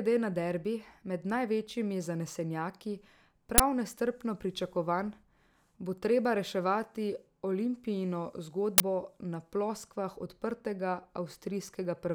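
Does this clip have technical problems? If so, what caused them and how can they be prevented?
Yes. Two uninitialised buffer faults occur, at 3.58 to 3.60 s and 8.78 to 8.80 s. Each is a short, loud crack. Leftover memory was played as samples, which fits a 20 ms block. Prevention: zero-fill buffers or ensure writing completes before playback.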